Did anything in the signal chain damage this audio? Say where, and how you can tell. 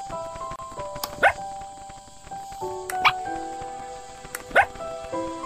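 Yes. A gap at a join of encoded pieces appears from 0.56 to 0.59 s: continuous sound drops into a gap of about 30 ms with smeared edges, then carries on exactly where it stopped. That places the damage at the codec stage. Separately encoded segments were concatenated without trimming the encoder's start-up delay and final-frame padding. A network dropout would lose material or be masked by concealment. Here nothing is missing; silence has been inserted.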